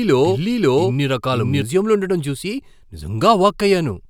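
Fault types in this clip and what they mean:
Doubled audio track: the speech is already playing twice when the clip opens, with a second full-band copy trailing about half a second behind and roughly as loud as the original. There's no decay or room colour on it, so it isn't an echo; it's most likely the same signal arriving again through a slower path. The copy cuts off abruptly at 1.62 s, just before "ఉండటం చూసి", and only one stream is heard after that.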